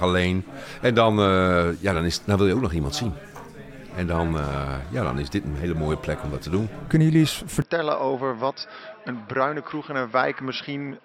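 At 7.62 s the sound abruptly turns duller and a bit boxier, and stays that way to the end. There's no gap at the change, just an instant shift. Everything above 5.6 kHz is gone, the level drops by roughly 5 dB, and a faint new noise floor sits far below the signal. That's the signature of an input switched to a poorer device, most likely a fallback microphone or a headset's call profile taking over mid-recording.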